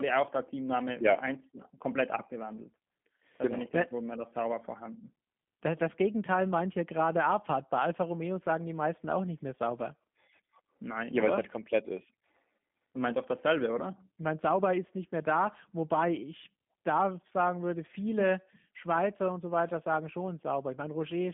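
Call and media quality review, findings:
Speech rough, slightly synthetic and buzzy throughout, muffled, no content above about 3.6 kHz, thin below 150 Hz. Probable component: G.729A codec. Speech rebuilt from vocal-tract filter, pitch predictor and sparse pulse excitation per 10 ms frame, which fits an 8 kbit/s link on a 150 Hz to 3.5 kHz narrowband line.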